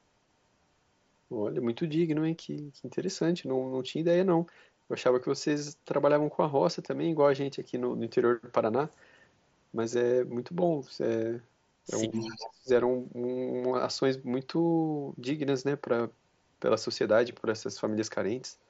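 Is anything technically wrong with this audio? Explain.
Yes. Two faults cluster around the 12-second mark.

From 12.12 to 12.49 s there is an echo leak. A faint, delayed copy of the talker comes back about 260 ms behind the original and roughly 15 dB below it. This is likely a far end playing the call on a loudspeaker whose echo canceller did not fully remove what its microphone picked up, so the residue was sent back.

From 12.36 to 12.69 s the speech is suppressed in double talk. It overlaps the tail of the echo. The voice ducks sharply, by around 20 dB at its deepest, and is affected for about a third of a second. The likely mechanism is an echo canceller that could not tell the near-end talker from loudspeaker echo while both were active, and so attenuated everything. The talker drops away and then returns at 12.69 s.

The Bluetooth mSBC headset path itself contributes only its expected light graininess on louder passages, with a bandwidth limited to 8 kHz.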